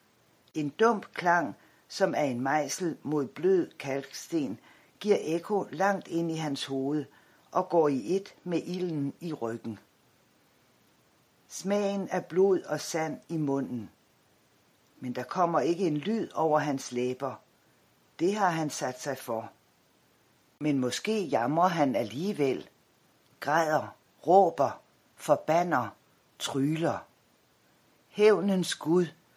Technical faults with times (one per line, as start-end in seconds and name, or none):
none